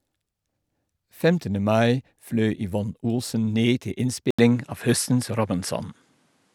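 Speech, with the recording likely switched to a poorer input device at 4.31 s, where a brief gap of about 80 ms marks the change. From there to the end the audio comes through a narrower channel with nothing above 13 kHz, so the top end loses its air and sounds duller. The level also shifts by about 5 dB, and a new, faint noise floor appears well below the speech.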